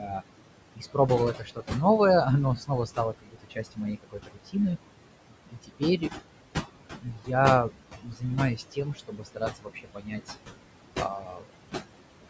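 Noise suppressor artifacts run through the whole speech recording. The suppressor pulls the room's background noise down by about 21 dB in each frequency band it judges to be steady, so the noise, which sits only about 10 dB under the speech, sinks in the gaps and swells back under the talking. Speech cut by the noise suppressor occurs at 0.0–0.23, 0.75–1.75, 2.56–4.56, 5.5–6.12, 7.0–7.31, 7.69–8.24, 8.56–10.3 and 10.91–11.47 s. In each stretch the suppressor mistook softer parts of the speech for noise and turned them down along with it, by about 9 dB at the start and by about 18 to 21 dB later, so consonants and endings sound swallowed for anything from a fraction of a second to about a second at a time. The call's microphone processing leaves nothing above 8 kHz.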